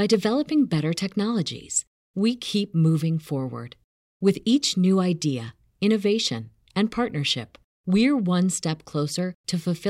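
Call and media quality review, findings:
No audible faults found in this speech recording.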